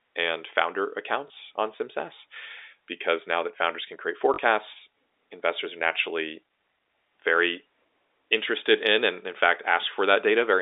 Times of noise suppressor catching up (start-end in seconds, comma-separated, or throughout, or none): none